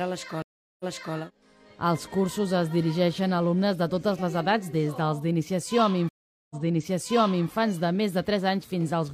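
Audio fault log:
0.42–1.17 s and 6.09–7.48 s: stream reconnect. The connection drops, leaving silences of 0.38 s and 0.41 s. A fresh decoder then resumes 0.37 s and 0.98 s earlier, repeating audio. Both show as a flat waveform and blank spectrogram band, then a muted or faded onset.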